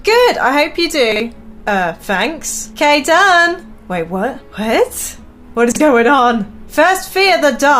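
Two brief jumbled moments at 1.12–1.2 s and 5.72–5.8 s: chunks out of order, where a 40 ms chunk arrived one chunk late, leaving hard joins.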